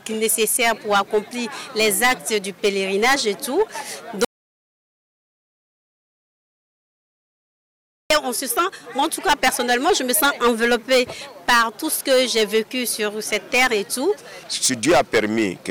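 Throughout the clip the signal is driven roughly 15 dB beyond what a stage in the chain can pass, so its peaks are sliced flat. This is hard clipping, and with around one sample in twenty hitting the ceiling, the flattened tops spray harmonics high into the spectrum. Every loud moment carries a harsh, gritty fuzz rather than occasional crackle.

From 4.25 s to 8.10 s the input is cut off and silence is written in its place, most likely from a lost connection or an accidental mute somewhere upstream. This audio dropout to silence removes about 3.86 s of material outright. The sound stops abruptly mid-flow and drops into dead digital silence with no room tone beneath it, then resumes just as suddenly.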